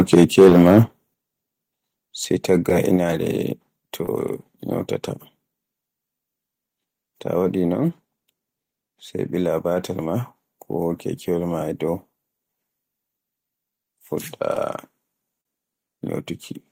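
A speech clip whose opening 0.8 s shows microphone overload: peaks are flattened and the loudest syllables take on a harsh, crackling edge. This is likely from an input level set about 6 dB too hot, with roughly 7 percent of samples hitting the converter ceiling. The microphone volume steps down suddenly three times, by about 2 dB at 0.14 s, about 7 dB at 1.14 s and about 4 dB at 2.97 s. Voice and background drop together, likely because the call software cut the device's input gain after detecting overload. Short concealed packet loss occurs at 0.49 s, 2.70 s, 4.06 s and 14.55 s, each a roughly 10 ms gap, and again from 15.41 to 15.46 s, where about 40 ms is missing. The receiver bridged each gap by extending the preceding sound, heard as a brief smear or wobble.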